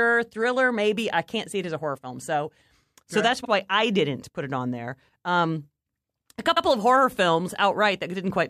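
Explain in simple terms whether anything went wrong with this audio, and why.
The speech stutters twice: at 3.44 s, after "so that's", a 52 ms slice plays a second time, and at 6.55 s, before "of horror", a 78 ms slice repeats. These are repeated frames, where a chunk of compressed audio was stored or sent twice, so it replays.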